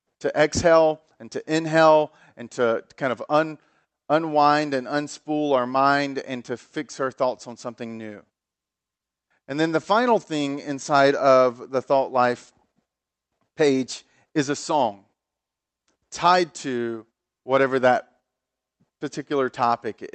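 Nothing stood out on listening to this speech recording carried over a call connection.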